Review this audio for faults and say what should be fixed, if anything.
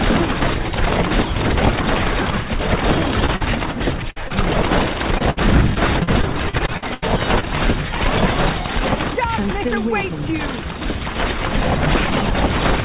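Short concealed packet loss hits at 3.26, 3.36 and 4.28 s: 20 to 40 ms gaps patched by extending the last sound, heard as quick smears or wobbles.

A burst of packet loss at 4.10 s drops about 60 ms. The receiver stretches and fades the previous sound, then jumps ahead with a chunk missing.

Repeated packet loss (robotic sound) runs from 5.18 to 7.48 s. Fifteen gaps, the longest 80 ms, covering roughly a fifth of that stretch, make it choppy with pieces missing.

To prevent this, fix the network path's loss and jitter, or add FEC and a deeper jitter buffer.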